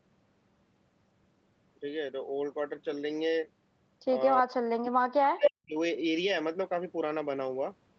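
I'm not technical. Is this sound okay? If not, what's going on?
No. Speech suppressed in double talk happens from 4.42 to 4.59 s and again from 4.8 to 5.76 s, when the speech fades almost to silence in pieces. Both sides were likely talking at once, and the call's echo canceller couldn't tell this talker apart from the other end's sound playing on this side's loudspeaker, so it turned everything down.

An echo leak comes at 5.44 to 5.5 s: a short copy of the sound returns about 265 ms late, roughly as loud as the original. The side playing the call on a speakerphone likely picked it up, and its echo canceller didn't remove it before sending it back.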